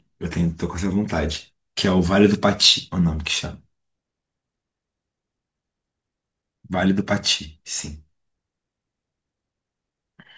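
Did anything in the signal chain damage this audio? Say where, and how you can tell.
No, no signal-chain damage audible.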